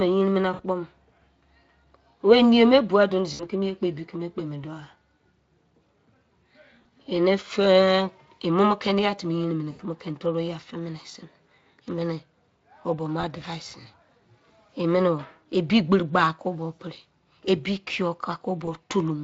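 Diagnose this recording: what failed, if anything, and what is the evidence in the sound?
VoIP packet loss concealed by the speech codec, a network-stage fault, at 0.53, 3.33 (just before "kimi ye kpo ebi"), 5.19, 6.81, 9.71, 13.21, 16.75 and 18.65 s. Across 20 to 80 ms gaps, the Speex decoder extends its last pitch and filter into a buzzy tone or coloured noise that fades, leaving speech weak just afterwards.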